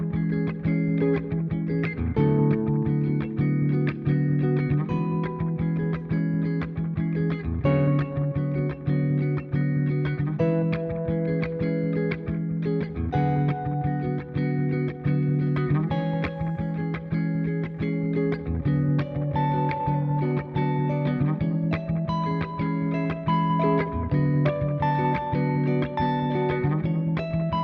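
No technical faults turn up anywhere in the audio. There is no moment in the sound that calls for a timestamp or a fix.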